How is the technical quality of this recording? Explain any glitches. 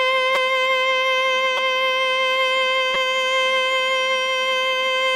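The music is marred by three brief repeated-buffer glitches, at 0.35 s, 1.57 s and 2.94 s. At each, new audio failed to reach the playback device in time, so it replayed its most recent buffer of about 5.3 ms, which fits a 256-sample buffer, three extra times. The looped slice, with a hard join at every repeat, lasts only around 16 ms and is heard as a short click or buzzy tick rather than a stutter, with essentially no music lost.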